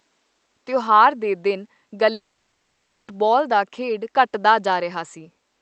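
A speech clip where, just after "ਤਿਉਹਾਰ ਦੇ ਦਿਨ", the sound at 2.13 s smears into a brief fading buzz, then drops to silence for about 0.72 s until 3.09 s, resuming at "ਦਾ ਖੇਡ ਘਟਦਾ" with nothing recovered. This is likely a long network dropout: roughly 0.94 s of audio never arrived, and the receiver briefly extended the last sound before giving up.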